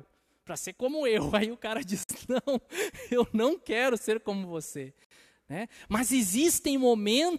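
Separately encoded pieces of this speech clip were joined untrimmed, keeping each encoder run's start delay and end padding. The resulting gap at a join of encoded pieces opens twice, at 2.03–2.09 s after "o cara" and at 5.05–5.11 s after "quero ser como você". Each is a brief silence with smeared edges, after which the speech resumes where it stopped.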